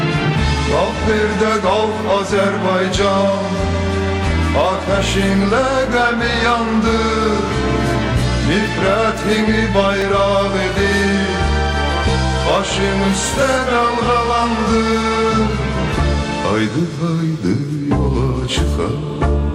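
At 10.01 s, chunks out of order: a 5.33 ms chunk plays one slot late; three hard joins.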